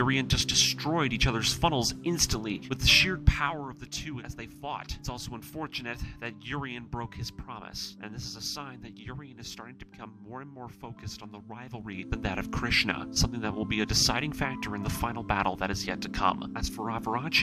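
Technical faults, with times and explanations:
2.94–3.76 s, zipper noise: the level falls about 10 dB in unsmoothed 1 dB steps, roughly fifteen a second. Each step clicks, so a ticking rides on the fade.
11.76–12.16 s, zipper noise: the level rises about 10 dB in 1 dB steps, roughly thirty a second. The unsmoothed jumps click faster here, giving a brief zipping buzz.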